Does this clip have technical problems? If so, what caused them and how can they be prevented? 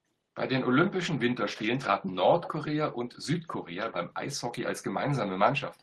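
Yes. From 2.42 to 2.49 s a faint, delayed copy of the speech surfaces, trailing by 158 ms and roughly 10 dB quieter than the direct voice. This is an echo leak, likely from a far-end loudspeaker whose echo canceller let part of the microphone pickup through and sent it back. Using a headset or retuning the echo canceller on that side would prevent it.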